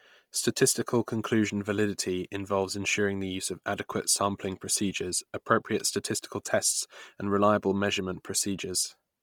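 From start to finish the speech carries a breathy, grainy edge, with the upper band replaced by a hiss-like wash that shimmers instead of holding steady detail. This is likely Bluetooth LC3 compression, heavily damaged. At a rate that points to around 32 kbps, the transform codec discards much of the high spectrum and fills it with noise. On a spectrogram the top region looks speckled and patchy in blocks that fit 10 ms frames.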